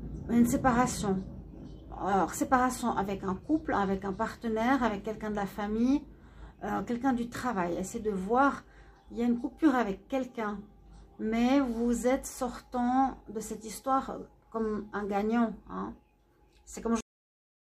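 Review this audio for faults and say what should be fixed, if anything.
The final buffers were never written or played, a cut-off end, so the audio stops abruptly in the middle of a sound at 17.01 s. There is no decay; it drops straight to digital silence for the remaining 0.67 s. To prevent it, flush and drain all pending buffers before the stream is closed or the file is finalised.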